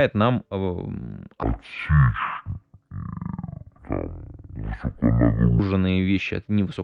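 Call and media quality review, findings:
Section at the wrong speed, 1.43–5.59 s, ending before "вещи от невысоконагруженных и": speech plays at half speed, pitch drops roughly ten semitones. Likely playback or editing clock mismatch.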